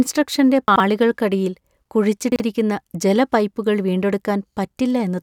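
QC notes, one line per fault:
0.68–0.80 s, chunks out of order: a 40 ms chunk plays two chunks late, after the two that should follow it. Nothing is lost, but the reordering leaves three hard joins, heard as a brief jumbled stutter.
2.32–2.40 s, chunks out of order: two adjacent 40 ms chunks swap places, one arriving a single chunk late. The short scramble and the three abrupt joins produce a quicker garbled blip.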